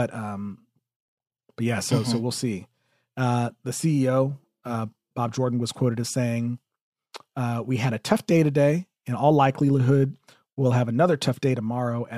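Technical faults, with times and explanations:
No technical faults can be heard anywhere in this recording.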